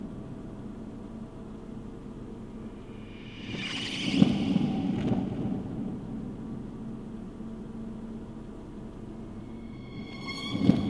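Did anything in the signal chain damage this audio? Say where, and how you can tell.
No, nothing along the chain audibly damaged these sounds; I hear no fault at any stage.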